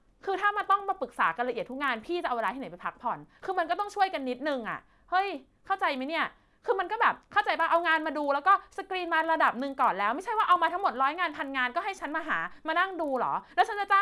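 From start to finish the speech carries a buzz at about 25 Hz, the signature of a resampler restarted on every block. The sound points to a 48 kHz to 24 kHz conversion done in separate 40 ms chunks, each converted without its neighbours' samples, leaving a small error at every seam. Unlike mains hum, which persists through pauses, these ticks vanish whenever the speech stops, and they sit exactly on the block rate.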